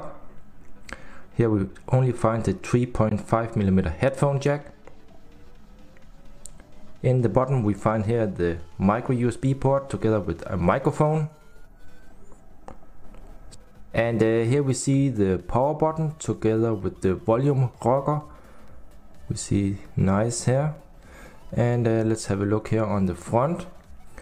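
At 3.09 s and 20.75 s the sound drops into a block of digital silence, about 17 ms and then 5.8 ms (the latter fits a 256-sample buffer), where output likely wasn't filled in time. The second is heard as a tick, and each appears as a flat waveform gap and a thin vertical spectrogram stripe.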